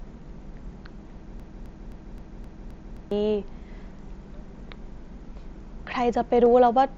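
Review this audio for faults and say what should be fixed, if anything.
From 1.40 to 3.11 s there's a broken-record loop: a 0.26 s chunk of speech plays back to back seven times, exact copies each pass, and whatever should have been said there is simply gone. That pattern points to the player, encoder or stream likely stalling and resending its last buffered fragment. Fix it by catching stalls upstream and dropping to silence or resyncing instead of replaying a stale buffer.

Right near the end, at 6.46 s, there's a single concealed Bluetooth headset packet loss, about 7.5 ms of audio lost between headset and phone. The receiver papered over it by continuing the waveform from what came just before, so it's nearly hidden. Keep the headset close to the phone and away from Wi-Fi and other 2.4 GHz congestion so packets arrive intact.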